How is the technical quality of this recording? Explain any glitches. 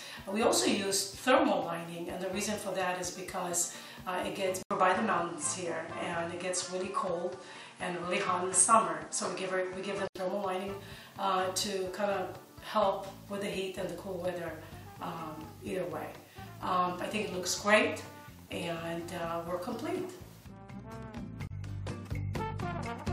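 The recording has one clear glitch. From about 4.6 s to 10.2 s, the sound changes character. A silence of 80 ms marks the switch. The likely cause is an input switched to a poorer device partway through. That device passes a narrower band, with nothing above 11 kHz. The sound turns duller and boxier. The level shifts by a few decibels. A new noise floor appears, roughly 35 dB under the signal. Full clarity returns at 10.2 s.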